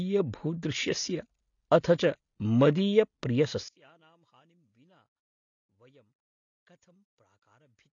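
Likely low-bitrate AAC compression, consistent with roughly 24 kbps, runs throughout: the speech has nothing above 7 kHz and plainly audible codec smearing and dulling. From 3.68 s to the end, a polarity-inverted channel is the likely cause of cancellation when summed to mono, dropping the speech about 36 dB.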